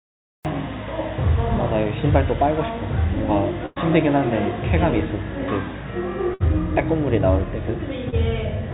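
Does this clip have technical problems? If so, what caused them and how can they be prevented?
Yes. There are three kinds of fault, heard through a narrowband call path with nothing above 4 kHz, which fits G.711 mu-law.

Cut-off start: Digital silence runs to 0.45 s. Then the sound begins abruptly mid-event, because capture started late. Start recording before the sound begins.

Burst of packet loss: At 3.66 to 3.78 s, about 100 ms is lost. At 6.34 to 6.42 s, about 60 ms is lost. Each time, the last sound is stretched and fades, then the audio jumps ahead. A larger jitter buffer or a steadier network prevents this.

Short concealed packet loss: At 8.10 to 8.14 s, about 20 ms never arrived. The gap was patched with a brief smear. Forward error correction would hide it better.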